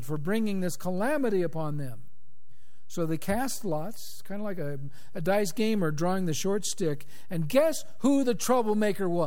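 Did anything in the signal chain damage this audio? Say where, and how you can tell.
Yes, there's a DC offset running through the whole speech clip, sitting at about −30 dBFS. You won't hear it as such. It shows up as the waveform shifted away from zero the entire time and as a steady lump of energy right at 0 Hz. That points to the analogue front end or the converter: a biased input stage or an uncorrected ADC leaking a constant voltage in, which quietly eats headroom on one side.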